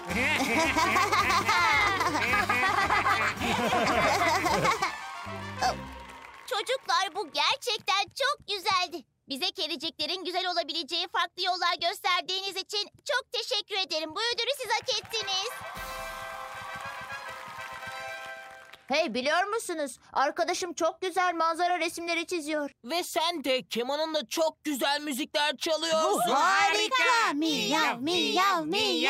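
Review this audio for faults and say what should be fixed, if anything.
A single loud pop at 1.41–1.43 s jumps a few dB above the sound, which continues underneath. It is likely a voltage pulse from a plug, switch or static discharge. Secure connections and switch equipment only while the signal path is muted.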